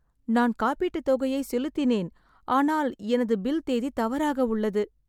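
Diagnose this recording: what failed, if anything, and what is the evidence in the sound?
Nothing failed, and the sound gives no evidence of a fault at any stage of the recording.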